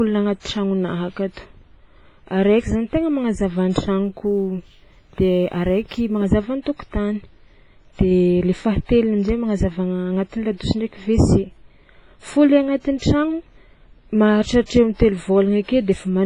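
WMA compression, present throughout, is the likely cause of the heavy codec damage across the whole speech clip. Nothing remains above 10.5 kHz, and the sound is washy, with a ringing edge and a hiss that swells and fades with the speech. These traits point to a transform codec running at a low bitrate, around 24 kbps. Its long blocks spread quantisation noise over tens of milliseconds and zero out weaker spectral detail.

Sample clock jitter appears from 4.05 to 6.26 s. The converter's clock wanders by a few microseconds, so samples land slightly early or late. Each timing error becomes an amplitude error that grows with the steepness of the waveform. The result is a faint grainy roughness, roughly 45 dB below the signal. It rises on loud and bright speech sounds and drops away in the pauses between them.

Pre-echo occurs at 14.66 to 14.70 s, where about 44 ms of hiss runs ahead of a sharp onset. 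The attack falls late within a transform block, and the codec sizes its quantisation noise for the loud part. That noise is then spread across the whole block, including the quiet moment before the attack. The onset sounds soft and smeared, announced by a brief breathy wash.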